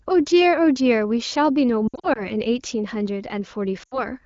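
From 1.87 to 2.23 s, the speech breaks up with lost AMR speech frames. Short gaps are scattered across about 280 ms, adding up to about 140 ms, and the longest run is 60 ms. Each time, the decoder repeats the last good pitch and vocal tract settings at falling gain, so the voice warbles and dips. At 3.83 to 4.06 s it happens again, about 80 ms in all. The wideband codec's light coding, consistent with 15.85 kbit/s, stays clear elsewhere.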